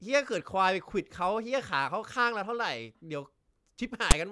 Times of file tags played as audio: 4.11

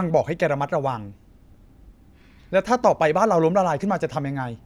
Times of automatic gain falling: none

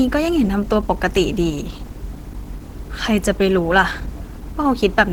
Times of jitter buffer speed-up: none

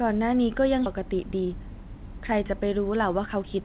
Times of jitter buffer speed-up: 0.96-3.60

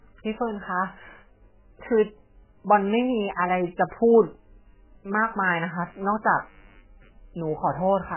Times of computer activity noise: 5.71-8.16

